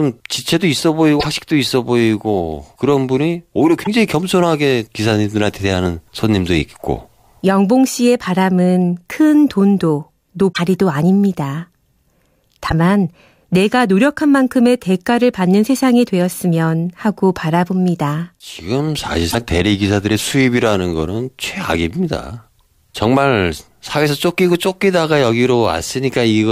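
At 1.16, 3.80, 10.49, 12.66 and 19.27 s, the speech breaks into short chirps or blips. Each lasts under a tenth of a second. This is damaged data in a compressed stream. Corrupt bytes make the decoder misread frames and lose sync until the next frame header.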